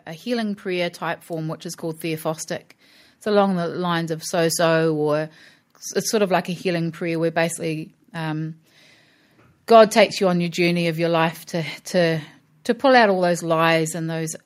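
Automatic gain rising runs from 0.39 to 4.32 s, ending just before "so or it's sort". The gain control judged the input too quiet and slowly raised its gain by about 7 dB, so the speech and the background noise swell louder together over those four seconds.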